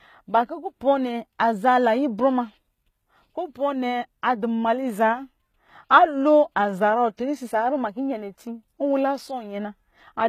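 Speech throughout keeps the artefacts of an earlier encoding, with nothing above 14.9 kHz: likely low-bitrate audio saved at a high bitrate, earlier damage surviving the MP3.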